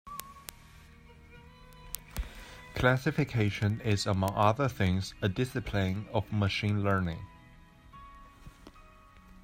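From about 0.12 s right through to 9.39 s, the speech carries word clock ticks: a steady run of sharp clicks, roughly one every 70 ms, so somewhere around 150 in all, and not all equally loud. It sounds like the digital link was read by a device on its own clock, drifting a few hundred ppm from the sender. Every time the clocks slip past each other, a single sample gets dropped or doubled, and you hear that as a tick.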